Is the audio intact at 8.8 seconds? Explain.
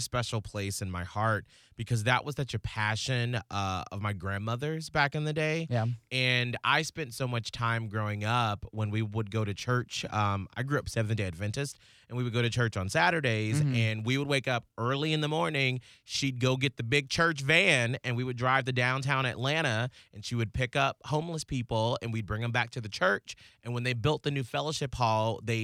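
Yes, the speech at 8.8 seconds is intact, with no dropout, click, distortion or other fault at that moment.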